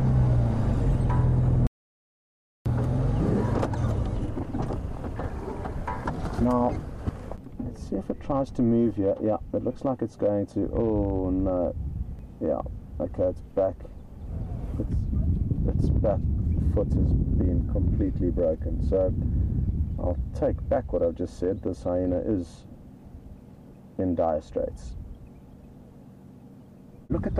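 From 1.67 s to 2.66 s the sound cuts out completely for about a second, an audio dropout to silence. The gap is silent with no room tone, so the input was likely lost while recording continued, and that stretch of material is gone.

At 7.09 s and again at 12.19 s there is a small jump forward, a dropped buffer (overrun). Roughly 20 ms is missing each time with no silence between the joined sides, likely from samples not being read before the hardware overwrote them.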